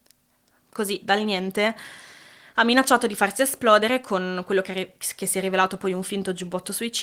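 No technical faults occur at any point in the audio, so there is nothing to describe in time order.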